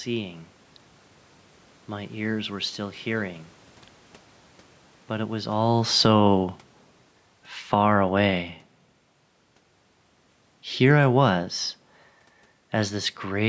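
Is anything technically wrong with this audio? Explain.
Yes, there's automatic gain falling from 5.22 to 6.2 s: the gain control decides the input is too hot and eases it down about 4 dB, so speech and room noise sink together.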